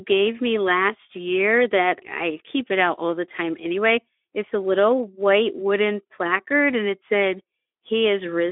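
No technical faults are audible.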